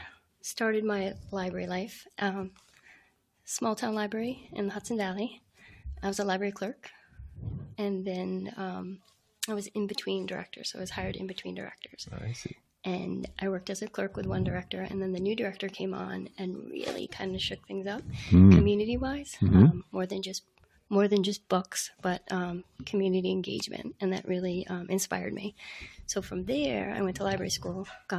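From the start, a noise suppressor built for speech is working on audio that isn't speech. It treats sustained and ambient content as noise, so the level swings by about 5 dB as it clamps down and lets go. The result is a pumping, with held sounds and tails thinning while sharp onsets pass. On a waveform the envelope breathes unevenly. On a spectrogram, steady bands and decays fade early instead of tapering naturally.

Within that, the suppressor cuts specific passages much harder: 0.15 to 0.43 s (about 12 dB), 2.09 to 3.47 s (about 12 dB), 5.4 to 5.61 s (about 11 dB), 7.02 to 7.18 s (about 9 dB), 8.99 to 9.42 s (about 11 dB), 12.55 to 12.72 s (about 12 dB), and 19.83 to 22.81 s (about 12 dB). In the longer spans the dips come in bursts rather than one continuous cut. Each is heard as the sound sinking or its decay being chopped. In the waveform these appear as sudden notches in amplitude, and in the spectrogram as darker patches.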